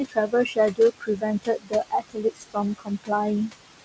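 Right from the start you can hear noise suppressor artifacts running through the whole clip. The suppressor is pulling the room noise down by about 19 dB in the gaps, then letting it swell back under the speech. That noise sits only about 11 dB below the talker. The band stops around 8 kHz, which fits a G.722 call path at 64 kbps.

On top of that, there's speech cut by the noise suppressor five times: 0.08 to 0.58 s, 0.74 to 1.23 s, 1.43 to 1.73 s, 1.90 to 2.57 s and 2.78 to 3.10 s. In each stretch it mistakes a bit of the talker for noise and ducks it by about 18 to 21 dB. In the first three, a fifth of a second or so sounds swallowed, the fourth one loses closer to half a second, and the last about 0.15 s.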